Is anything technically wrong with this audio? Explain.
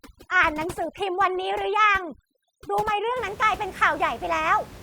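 Yes. From the start to 3.16 s the background drops and breaks up into twinkling specks. This is overdone noise removal: a noise reducer set too hard shuts down individual frequency bands near its noise estimate, taking quiet parts of the voice along with the room noise, which sits about 17 dB below the speech.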